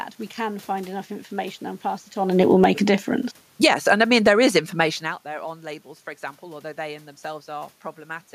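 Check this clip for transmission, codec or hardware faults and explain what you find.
The speech shows the automatic gain control pulling the level down and pushing it back up twice, and the room noise moves with each change.

Automatic gain falling, 2.25 to 2.86 s (about 4 dB) and 3.48 to 4.2 s (about 8 dB): the control judged the input too loud, or its background noise too strong, and cut gain, so speech and background sink together.

Automatic gain rising, 2.77 to 3.13 s (about 3 dB) and 3.84 to 6.71 s (about 5 dB): the control judged the input too quiet and raised gain gradually, swelling speech and background together. The talker's own movement around 2 s and 5 s also shifts the voice level at the microphone, which is not a system fault.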